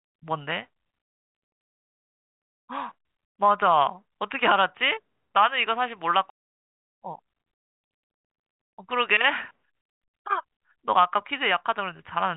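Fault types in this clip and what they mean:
Skip ahead: A stretch of speech was thrown away in transit or when an overfull jitter buffer discarded it, while later audio was already queued. At 6.3 s playback leaps forward with no fill at all, roughly a second of speech goes missing, and the sound on either side is spliced almost directly together. The listener hears an abrupt jump rather than a silence, and the delay drops by about the same second.
Jitter buffer speed-up: With the jitter buffer holding more speech than its target, the receiver trimmed many small slices of one or a few pitch periods in a row to shrink the backlog. From 6.40 to 9.26 s the speech runs about 11% fast, losing roughly 0.3 s, then from 9.71 to 11.81 s about 5% fast, losing around 0.1 s. Pitch stays put, but the talking sounds rushed.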